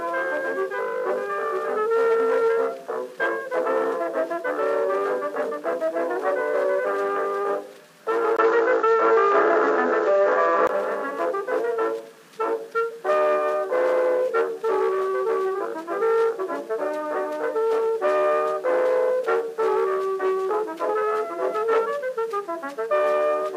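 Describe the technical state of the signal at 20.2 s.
At 20.2 s the audio is intact, with no technical fault present at that moment.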